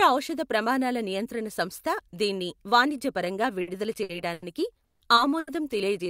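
At 3.61 s, just after "నియంత్రణ సంస్థ దీన్ని వాణిజ్యపరంగా", the speech holds for about 60 ms. This is a short stall from a late packet. The next packet missed its slot, so the receiver stretched the last sound until it came. Nothing is lost. Further stalls follow at 4.03 s (60 ms), 4.33 s (90 ms), 5.15 s (20 ms) and 5.39 s (80 ms). Each is a brief drawn-out sound with a slight buzz or dip, and each pushes the speech slightly later.

At 4.84 s comes a longer call audio freeze, lasting 170 ms. Packets were likely held up in transit and the buffer drained. The last sound carries on as a fading buzz or hiss, then about 80 ms of silence, until 5.03 s. The speech then resumes where it stopped, later than before. No speech is missing.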